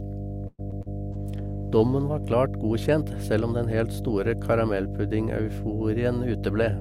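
A ground loop or nearby transformer couples the 50 Hz power line into this speech recording throughout, leaving a strong, steady mains hum nearly as loud as the speech itself. From 0.47 to 0.61 s a call audio freeze occurs, likely because packets were delayed and the jitter buffer ran dry. The last sound is stretched into a fading buzz and ends in a short silence, then the speech resumes where it stopped, about 113 ms late, with nothing lost. Short concealed packet loss follows at 0.71 to 0.74 s and 0.82 to 0.88 s, where audio failed to reach the decoder in time and was patched by extending the preceding sound, giving brief smeared wobbles. From 1.14 to 2.34 s a call bitrate drop cuts the encoder from 64 to 17 kbps, so the speech turns coarse, watery and dulled in the highs until the rate recovers.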